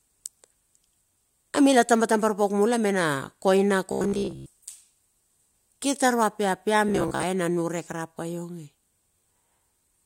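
At 3.92 to 4.50 s, after "mula me na koina", robotic sound from repeated short buffers sets in. It recurs at 6.89 to 7.23 s. Speech becomes a rigid 66.8 Hz buzz, likely from one 15 ms buffer looping.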